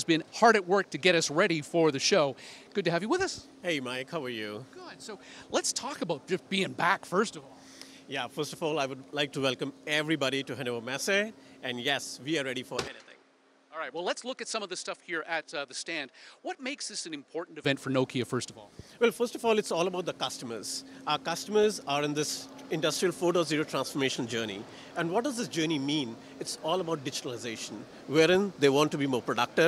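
At 12.88 s the sound abruptly turns duller and drops noticeably in level, about 10 dB quieter, with nothing heard above 10.5 kHz and a faint new background noise sitting far beneath it. There is no gap at the change. At 17.64 s the fuller, brighter sound returns just as suddenly. This is most likely an input switched to a poorer device: the recording moved to a narrower-band microphone with its own level and noise floor, then switched back.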